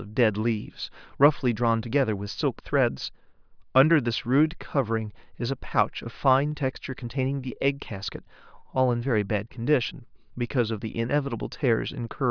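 No technical faults can be heard anywhere in the speech. Nothing in the sound points to a problem in how it was recorded, processed or delivered.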